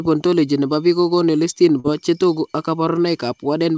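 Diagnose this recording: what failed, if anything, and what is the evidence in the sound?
A short concealed packet loss in the network stage of the call: around 1.80 to 1.87 s the speech briefly smears. About 40 ms of audio never arrived, and the receiver filled it by extending the preceding sound before crossfading back into the band-limited G.722 signal.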